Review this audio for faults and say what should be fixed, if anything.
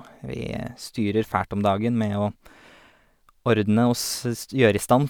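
No faults can be heard here; nothing needs fixing.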